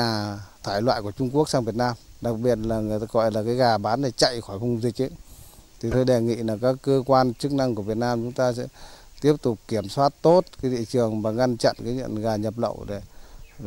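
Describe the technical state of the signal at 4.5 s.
A brief, faint glitch of misplaced energy sits at 4.49 to 4.52 s, peaking at about -40 dBFS. This is a corrupt frame decoded: a single compressed frame arrived with flipped bits, and the decoder played it anyway, scattering energy into the wrong frequencies.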